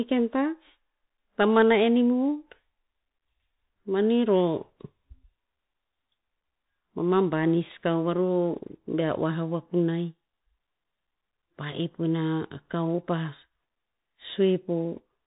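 Throughout the speech, the sound is boxed in, with nothing above about 3.8 kHz, scratchy s sounds and a granular hiss beneath. This is the Bluetooth CVSD headset codec, fitting a 64 kbps stream, whose one-bit slope tracking falls behind fast high-frequency movement.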